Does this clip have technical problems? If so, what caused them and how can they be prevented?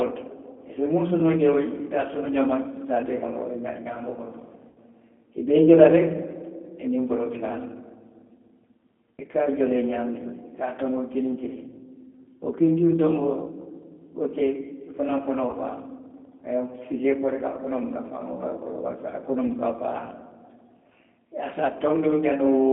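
Yes. The whole clip carries G.729 codec damage. The speech sounds rough and slightly synthetic. Nothing passes below 200 Hz or above 3.5 kHz. The codec rebuilds each 10 ms frame from a filter, a pitch predictor and a few pulses. The damage fits G.729A at 8 kbit/s. To prevent it, use a wideband codec such as G.722 or Opus.

There is also VoIP packet loss concealed by the speech codec. It occurs at 4.68 to 4.78 s, 15.51 to 15.54 s and 19.47 to 19.51 s. The first gap is about 80 ms, which points to four lost packets. The others are about 20 ms each. The decoder stretches its last frame into a fading fill. To prevent it, fix network loss and add a jitter buffer or forward error correction.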